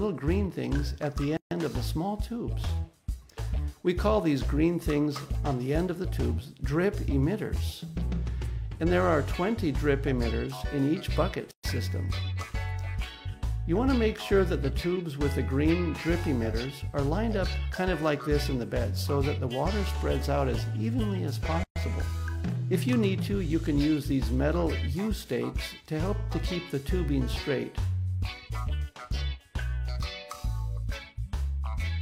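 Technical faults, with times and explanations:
1.37–1.51 s, 11.51–11.64 s and 21.64–21.76 s: gap at a join of encoded pieces. Continuous sound drops to silence for about 142 ms, then 124 ms twice, repeating every 10 s. Each piece was encoded on its own and joined untrimmed. The encoder's start-up delay and last-frame padding both remain, leaving a hole. The edges are smeared by the codec. The sound then resumes exactly where it stopped.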